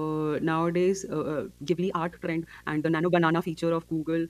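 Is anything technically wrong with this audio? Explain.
Yes, there are two faults. Throughout the speech there is a steady buzz at 59.94 Hz with gritty hash above it and a very high tone at 15.7 kHz, sitting about 25 dB below the speech. This is video or display buzz: a screen or video cable is coupling into the audio path, so the picture's field rate shows up as the buzz and its line-scanning rate as the high tone.

From 1.44 s to the end, the speech suddenly runs at twice its earlier pace while its pitch stays the same, giving a rushed delivery. This time-stretched section was likely produced by software squeezing the audio to fit a shorter length, keeping the pitch by dropping short pieces of the waveform rather than simply playing it back faster.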